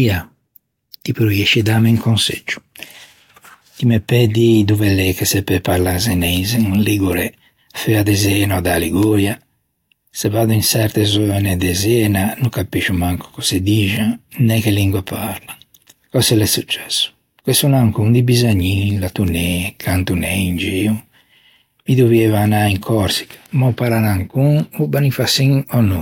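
Speech, with sharp, unevenly loud ticks about every 0.4 s from 0.29 s to 25.74 s: word clock ticks, single slipped samples from an unlocked digital link drifting roughly 70 ppm.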